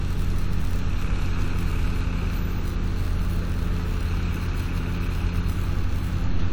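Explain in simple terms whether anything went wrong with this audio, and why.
WMA compression, throughout: the sound rings and smears, with hiss swelling alongside it, likely because the encoder discarded detail to shrink the file.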